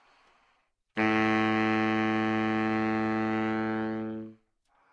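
No technical faults can be heard in this audio; the signal comes through intact, with no dropouts, clicks, distortion or level problems at any point.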